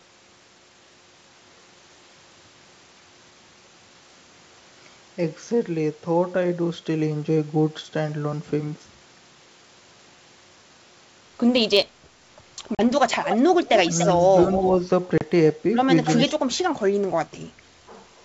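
At 12.75 s the speech drops into a hard-edged silence lasting 40 ms. This is packet loss on an ADPCM call, and the gap fits about four lost packets. ADPCM codes each sample as a difference from a running prediction, so when audio resumes the receiver's predictor and step size no longer match the sender's. The speech comes back slightly distorted, then settles within a few tens of milliseconds.

From 13.29 to 13.39 s, 13.65 to 14.06 s and 14.51 to 14.63 s, a delayed copy of the speech trails the original by 289 ms. It is strong in the short scraps, around 5 dB below the speech, and weaker in the longer stretch, around 10 dB down. This echo leak is likely a loudspeaker on one side whose echo canceller let part of the microphone pickup through and sent it back.

At 15.18 s a second packet loss gap of 30 ms, roughly three packets, produces the same hard dropout. On recovery the speech is again slightly distorted while the decoder's state catches up.

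From 16.05 to 16.3 s the echo leak returns at the same 289 ms delay, roughly 10 dB below the speech.

From 16.4 to 16.8 s the talker's speech is pulled down sharply, by as much as about 30 dB at the deepest point. It dips again more lightly, by about 10 dB, from 16.99 to 17.04 s and from 17.24 to 17.38 s. This is speech suppressed in double talk. The likely cause is an echo canceller that could not separate its own talker from the loudspeaker echo while both sides spoke at once, so it attenuated both. Throughout, the G.722 wideband coding carries speech up to 7 kHz without audible coding damage of its own.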